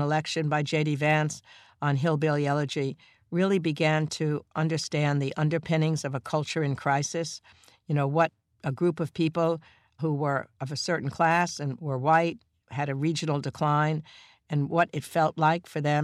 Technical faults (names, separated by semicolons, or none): dropped samples